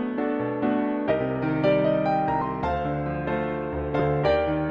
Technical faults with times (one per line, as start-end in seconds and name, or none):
1.09-1.12 compressed frames skipped
2.41 compressed frames skipped
3.99 compressed frames skipped